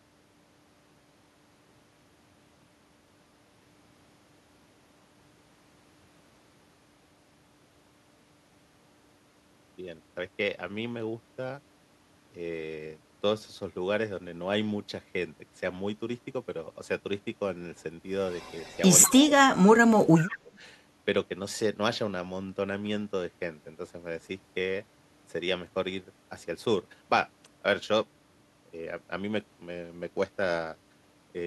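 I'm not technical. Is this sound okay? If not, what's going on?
No. Around 18.3 to 18.8 s and again at 19.0 to 19.3 s there is an echo leak: a speakerphone's echo canceller likely missed some sound, so a copy of the voice returns about a fifth of a second late. From 19.1 to 19.6 s and 19.7 to 20.6 s there is speech suppressed in double talk: with both sides talking at once, the echo canceller likely turned down the talker's own voice, which drops away in patches.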